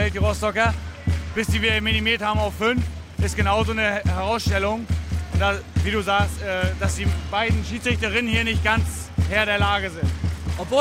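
Nothing here calls for comment, as the audio runs its whole length without a single technical fault turning up anywhere along the way.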